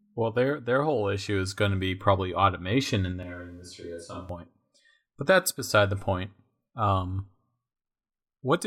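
Right after "be probably automation in", at 3.23 s, the sound jumps to a hollow, roomy tone with thinner bass, drops about 5 dB, and picks up room noise around 35 dB below the speech. It's likely a switch to a distant microphone, snapping back at 4.29 s.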